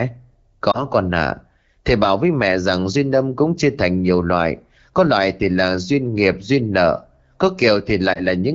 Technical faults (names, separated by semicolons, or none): lost AMR speech frames